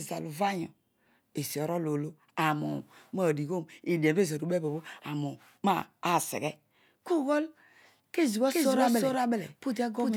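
From 8.50 s to the end, the speech suddenly gains a full second layer: an exact copy running roughly 0.4 s behind and about as loud as the original, so every syllable is echoed flat and dry, with no decay or room tone, and the copy cuts in abruptly. This is a doubled audio track, likely from the same signal being captured again through a slower path and mixed back in out of step.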